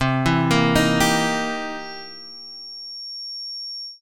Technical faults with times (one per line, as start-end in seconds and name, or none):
1.74-4.02 feedback whistle